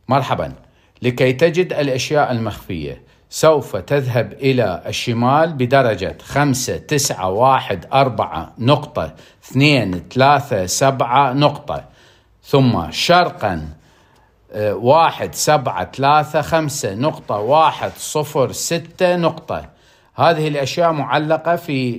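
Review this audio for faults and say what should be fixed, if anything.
There is one fault: a corrupt frame decoded, from 6.10 to 6.13 s. It sounds like a short chirp or blip lasting about 20 milliseconds. Bits inside a few compressed frames were damaged, and the decoder played those frames as if they were valid. Misread gains and codes placed energy at the wrong frequencies for the length of the damaged frames. The burst peaks at about -20 dBFS. Add error detection, such as a checksum per frame, so the decoder conceals damaged frames instead of playing them.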